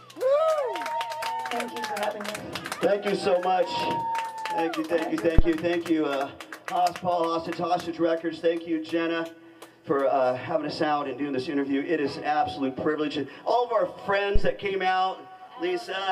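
A supply being switched on a live input sends a sudden DC step through the coupling capacitors, producing a phantom power thump. The first comes at 5.39 s, running to 5.49 s: a deep low-frequency thud peaking near about -3 dBFS, close to overload, and dying away within about 24 ms. A second, softer thump follows at 14.36 to 14.57 s, peaking at about -8 dBFS with a slower 49 ms decay.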